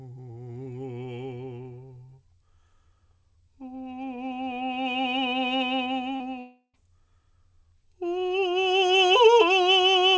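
At 6.16 s the music shows a short concealed packet loss lasting about 40 ms, to 6.22 s. That slice of audio did not reach the decoder in time, so the receiver extrapolated from the preceding sound for roughly 38 ms and crossfaded back into the real signal. The result is a brief smear in the music rather than a hard gap, with a momentary softening of detail where the patched segment sits.

From 6.40 s to 6.75 s the audio shows the signature of a long network dropout, most likely a stall in packet arrival of about 340 ms. The decoder carries the last sound forward as a fading, buzzy continuation for roughly a third of a second, ending in a short stretch of near-silence of about 70 ms. When the music resumes, the missing portion is simply skipped, and nothing above 8 kHz is present on either side, consistent with a G.722 call path at 64 kbps.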